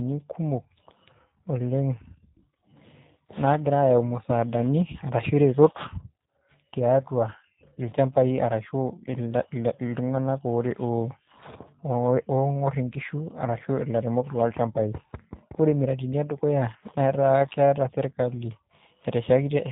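G.729 codec coding runs through the whole clip, from the first second to the last. The speech has been rebuilt from a compact model, a vocal tract filter plus a pitch predictor excited by a handful of pulses per 10 ms frame, rather than carried as a waveform. Nothing above 4 kHz survives, so sibilants are dull and the top is missing. The damage is plainly audible: the speech sounds rough and slightly synthetic, consistent with G.729A at about 8 kbit/s.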